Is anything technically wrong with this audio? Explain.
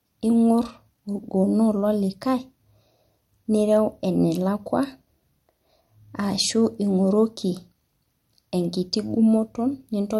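Yes. Throughout, this is low-bitrate audio saved at a high bitrate: nothing is present above 16.6 kHz, a cut-off that fits an MP3 encode around 62 kbit/s, likely re-saved as 320 kbit/s MP3. The bigger file can't restore what the first pass removed, so the speech keeps that dull, band-limited top end.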